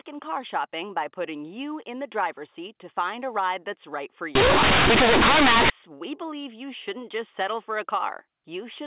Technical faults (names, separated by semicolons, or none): companded audio read as linear